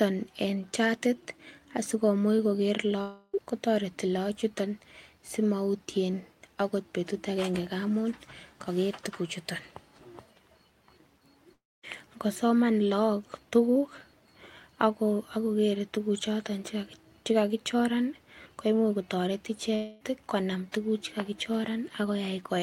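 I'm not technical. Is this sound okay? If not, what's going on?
No. A long network dropout likely hits the speech at 3.01–3.35, 11.53–11.85 and 19.75–20.02 s: audio stopped arriving, a fading buzz covered each gap (the middle ending in silence), and the lost speech never returns.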